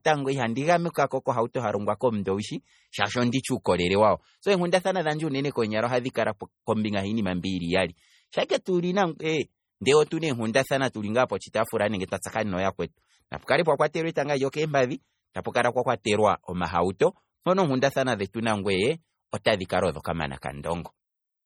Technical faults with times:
0.00-21.45 MP3 compression

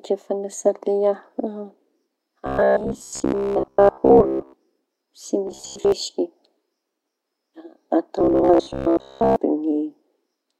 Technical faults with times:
2.47-4.53 robotic sound from repeated short buffers
5.47-5.92 robotic sound from repeated short buffers
8.19-9.36 robotic sound from repeated short buffers

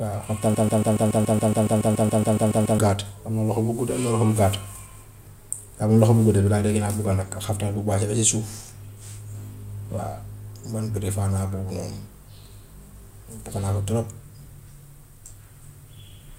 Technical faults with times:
0.55-2.79 broken-record loop

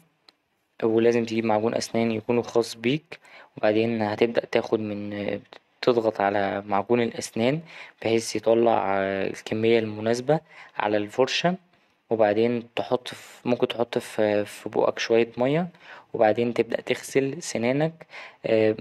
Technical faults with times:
none

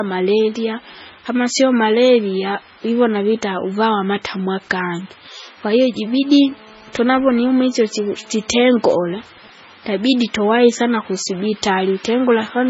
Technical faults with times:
0.00-12.70 MP3 compression
6.02-9.14 GSM phone buzz
9.25-10.34 GSM signalling bursts

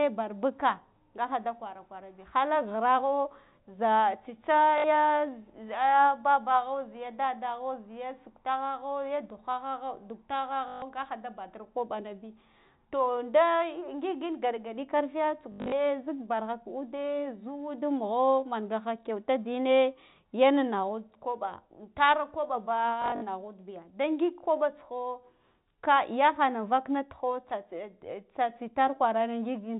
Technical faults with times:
4.78-4.84 packet loss with last packet repeated
10.68-10.82 packet loss with last packet repeated
15.52-15.72 packet loss with last packet repeated
23.02-23.22 packet loss with last packet repeated

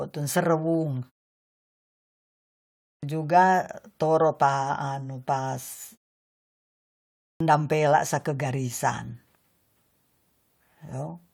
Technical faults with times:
2.73-3.03 clipped start after a pause
7.15-7.40 clipped start after a pause

